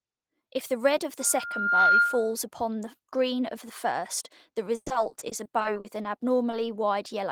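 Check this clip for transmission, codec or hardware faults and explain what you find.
Three faults are audible: a feedback squeal and two stretches of packet loss.

Loudspeaker feedback squeal, 1.19 to 2.35 s: the microphone is re-capturing its own loudspeaker, and at 1.4 kHz the loop gain tops unity. That tone swells over roughly 0.7 s into a piercing whistle, about 10 dB above the sound.

Repeated packet loss (robotic sound), 4.75 to 6.06 s: about a dozen holes arrive in quick succession, the longest 110 ms. The receiver patches each by extending the previous sound, so about a quarter of the stretch is synthetic, and it comes out choppy with pieces missing.

Short concealed packet loss, 6.51 to 6.55 s: a brief hole reached the decoder too late, and about 20 ms was bridged by continuing the preceding sound before blending back. It registers as a fleeting smear or wobble.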